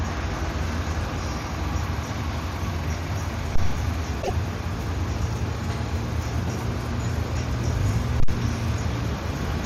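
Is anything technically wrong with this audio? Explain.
Yes. There are two phantom power thumps and one burst of damaged data in a compressed stream.

The phantom power thumps fall at 3.56 to 3.83 s and at 8.20 to 8.33 s. A supply switched on or off on the live input sends a voltage step through the coupling capacitors. The result is a deep low-frequency thump, decaying in about 62 ms and 30 ms respectively.

The damaged data in a compressed stream runs from 4.19 to 4.30 s. Corrupted bytes make the decoder misread frames and lose sync until it finds the next frame header. This produces a short, glitchy blip.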